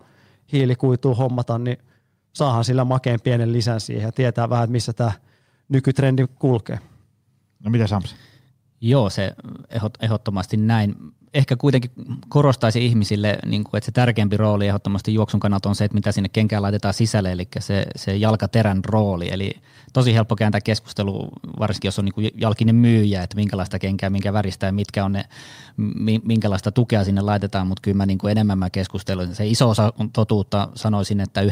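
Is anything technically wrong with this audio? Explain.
No, nothing technically wrong can be heard in this speech recording, and the signal stays intact and steady throughout.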